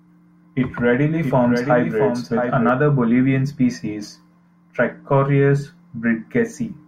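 A doubled audio track runs from 1.23 to 2.69 s in this speech recording: a second, full-band copy of the speech trails the original by roughly 0.7 s, sitting a few decibels lower, around 5 dB down. The copy carries no reverb tail or room colouring and cuts in and out abruptly at both ends. The likely cause is the same signal arriving twice, once through a slower capture path or an edit that left two offset copies in the mix.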